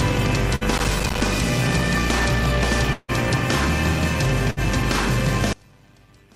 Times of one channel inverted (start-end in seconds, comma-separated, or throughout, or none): 5.53-6.35